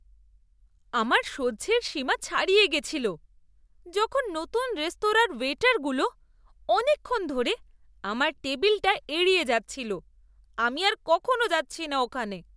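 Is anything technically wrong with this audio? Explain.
No, nothing technically wrong turns up anywhere in this speech recording.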